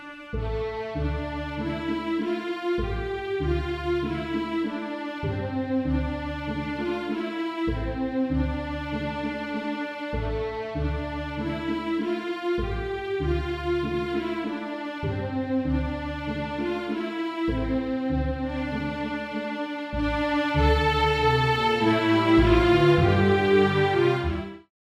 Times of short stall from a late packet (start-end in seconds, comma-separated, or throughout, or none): none